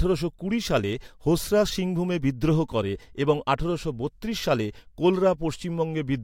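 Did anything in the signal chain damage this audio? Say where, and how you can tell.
No, nothing in the signal chain damaged this audio.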